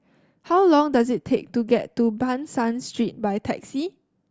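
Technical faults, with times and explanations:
Nothing technical stands out here; it's a short bit of speech with no problems to point to.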